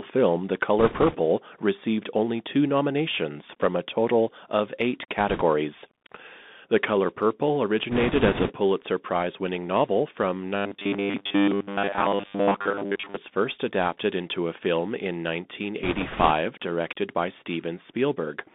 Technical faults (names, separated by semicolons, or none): Bluetooth CVSD headset codec; bit errors on a Bluetooth voice link; robotic sound from repeated short buffers